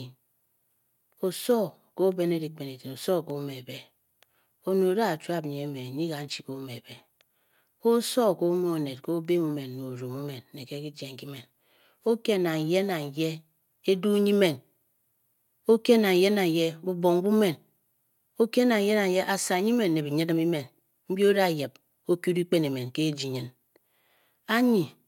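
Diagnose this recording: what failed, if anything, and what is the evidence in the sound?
Dropped samples, likely at the driver or buffer stage: the stream lost a handful of samples twice, so the waveform jumps to a later value. Each gap is far too brief to remove any sound, leaving a single sharp click in the speech at 4.92 s and 6.33 s.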